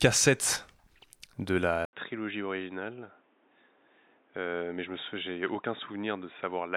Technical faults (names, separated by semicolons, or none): input switched to a poorer device